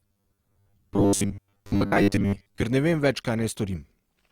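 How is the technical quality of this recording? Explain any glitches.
The first part of this speech recording is degraded. From 0.01 to 2.63 s there is robotic sound from repeated short buffers, likely a roughly 10 ms chunk replayed while most of the real audio is skipped, which imposes a rigid, metallic 100 Hz buzz.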